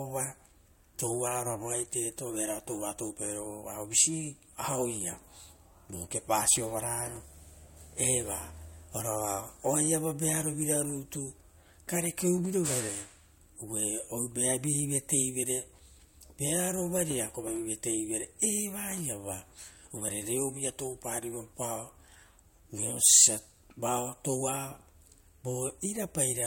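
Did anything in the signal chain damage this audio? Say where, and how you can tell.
Yes. Throughout, the speech has codec artefacts and nothing above 16.6 kHz. At the codec stage, this is likely low-bitrate audio saved at a high bitrate, fitting a 64 kbit/s MP3 re-encoded at 193 kbit/s.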